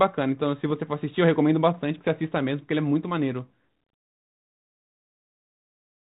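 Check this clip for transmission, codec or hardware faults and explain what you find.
One transmission fault stands out in the speech, over an ADPCM-coded telephone band whose light coding noise fits G.726 at 32 kbit/s.

Bit errors on an ADPCM link, 1.98 to 2.09 s: a small fraction of a percent of bits flipped, fitting a handful of damaged frames. Each error throws off the decoder's step size and prediction, so the damage lingers briefly, heard as pops, rough bursts and quick level jumps.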